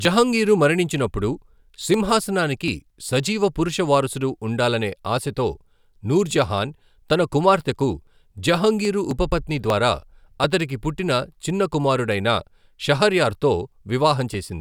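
Speech recording; no technical faults detected anywhere in the clip.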